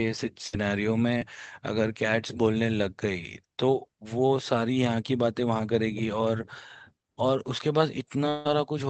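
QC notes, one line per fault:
0.47–0.55 s, burst of packet loss: several packets were lost or arrived too late, so the receiver stretched the last sound for about 54 ms as a fading smear, skipping roughly 60 ms of audio.
1.19–1.23 s, short concealed packet loss: about 20 ms never reached the decoder; the receiver extrapolated the preceding sound for 21 ms, leaving a brief smear before blending back.
8.29–8.47 s, long network dropout: likely a network stall cut off incoming audio; a 162 ms concealment buzz or hiss fills the gap, and about 160 ms is lost.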